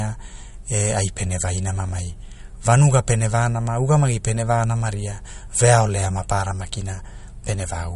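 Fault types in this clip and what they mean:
MP3 compression: the speech has nothing above about 11.1 kHz and a plainly audible watery, swirling texture, likely from an MP3 encoder starved of bits, which fits a low bitrate around 48 kbps. Short of bits, it cuts the treble at a fixed frequency and drops weak frequency components that flicker on and off between frames. A plain low-pass filter would dull the top without that shifting, bubbly residue.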